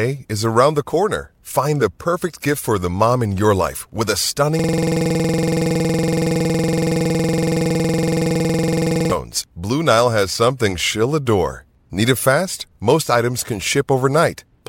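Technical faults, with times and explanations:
4.59–9.12 s, system hang loop: just after "your life with a", a single 46.44 ms slice of the speech repeats exactly, 97 times over about 4.5 s, which fits a 2048-sample buffer. The system or audio driver stopped supplying new data while the sound hardware kept replaying the same ring buffer. Because the loop is so short, the repeats merge into a steady, rough buzz at the 21.5 Hz loop rate rather than a distinct stutter.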